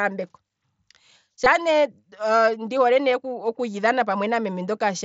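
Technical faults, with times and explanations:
1.44 s, concealed Bluetooth headset packet loss: a brief run of voice packets between headset and phone failed to arrive, and the receiver filled the hole by repeating the closest-matching slice of the preceding waveform. The gap spans about 15 ms, which fits two lost mSBC frames, so it passes as a buzzy hitch at steady level with a slight warble as real speech resumes, heard through the mSBC link's light graininess.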